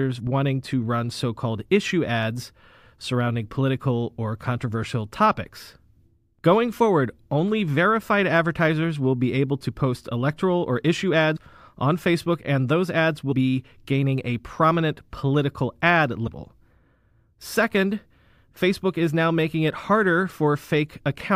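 Compressed frames skipped in this speech clip at 11.35 s, 13.31 s and 16.26 s: the audio jumps ahead by about 70 ms, then about 100 ms twice, fitting three or four lost frames of roughly 26 ms.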